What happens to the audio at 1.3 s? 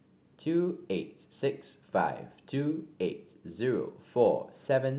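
Nothing goes wrong at 1.3 s; the speech carries on intact through that moment, with only the narrowband call-path sound, nothing above 4 kHz, that fits a G.711 mu-law codec running normally.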